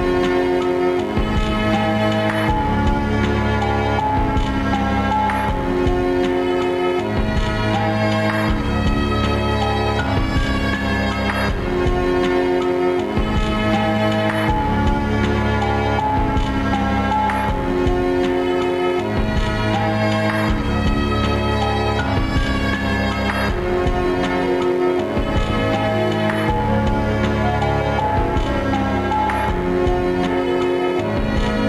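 A steady, raspy mains buzz runs through the whole sound, sitting roughly 25 dB below the signal. It is built on 50 Hz harmonics reaching up to several kHz, the mark of sharp switching spikes from a dimmer, rectifier or unshielded cable entering the chain twice per mains cycle.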